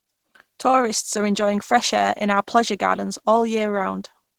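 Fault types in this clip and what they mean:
Opus compression: The speech throughout is plainly damaged in the way a low-rate Opus encode likely causes. The lower range sounds muffled and hoarse, as when the encoder codes it with its speech layer, and the top end is kept across the full band but rebuilt from folded or noise-filled bands, so it sounds grainy and rough instead of clean. That mix points to hybrid mode at a low rate, around 16 kbps.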